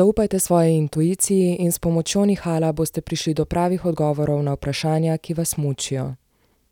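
No technical faults are audible anywhere in the speech recording.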